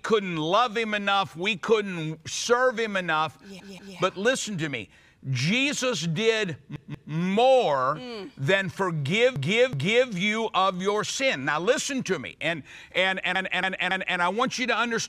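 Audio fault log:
3.60–3.97, 6.76–7.13, 9.36–10.10 and 13.35–14.19 s: repeated frames. A block of about 186, 186, 372 and 279 ms replays two, two, two and three extra times, so the sound stutters. The waveform and spectrogram show identical patterns placed back to back.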